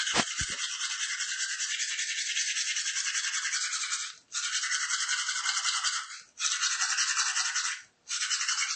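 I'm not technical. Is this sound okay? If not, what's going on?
No. Throughout the clip the sound is dull and watery, with a swirling, metallic edge on bright, hissy parts and sharp onsets that smear. This is plainly audible MP3 compression, likely from saving the file at a low-quality setting. To save space, the encoder discarded everything above 8.3 kHz, which removes the crisp top end. It also dropped faint details that flicker in and out, creating the warbling texture.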